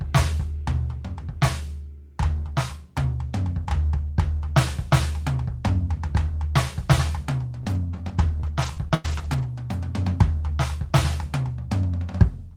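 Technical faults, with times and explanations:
7.63–9.44 s: repeated packet loss (robotic sound). Six gaps hit the music here, the longest 99 ms, about 200 ms in all. Each hole is bridged by extending the preceding audio, roughly a third of a second rebuilt, leaving a choppy texture with pieces missing.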